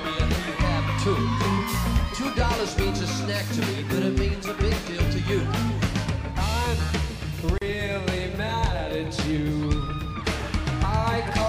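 At 7.58 s a gap at a join of encoded pieces breaks the continuous sound for about 36 ms. Two separately encoded segments were joined without trimming, so the encoder's start-up delay and the padding of the final frame both remain as a hole. The codec blurs its edges into a soft fade rather than a hard cut. Unlike a dropout, nothing is missing: the sound resumes exactly where it stopped.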